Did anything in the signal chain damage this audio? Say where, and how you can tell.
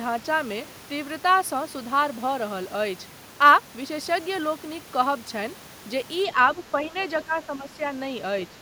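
Yes, call processing: speech dips around 10 dB at 6.55–6.59, 6.81–6.95, 7.25–7.82 and 8.49–8.58 s. That's likely speech suppressed in double talk by the echo canceller.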